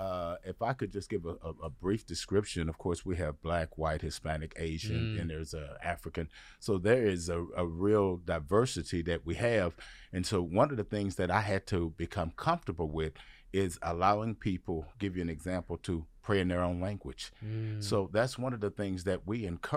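Speech recording with no technical faults to report.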